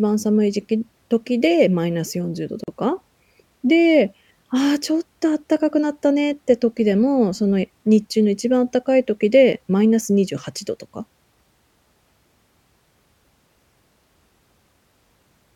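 At 2.64 s the speech stops dead for about 40 ms, then resumes at 2.68 s: a gap at a join of encoded pieces. The audio was evidently encoded in separate sections and spliced without trimming, so the encoder's start-up delay and final-frame padding left a short silence in the middle. Unlike a packet-loss dropout, nothing is missing; the speech picks up exactly where it stopped, and the edges are smeared by the codec, so the truly silent part is shorter.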